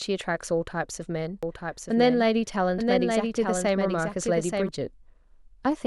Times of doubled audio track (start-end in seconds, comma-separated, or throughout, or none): 1.43-4.69